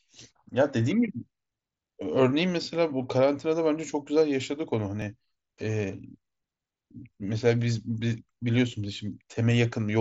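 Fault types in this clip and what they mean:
Dropped buffer (overrun): At 5.02 s the speech jumps slightly forward with no silence between, losing only a few milliseconds of sound. The likely cause is an overrun: the audio hardware overwrote a block of samples before the program collected it, so the sound on either side was joined directly. The mSBC headset path's band limit near 8 kHz continues unchanged across the join.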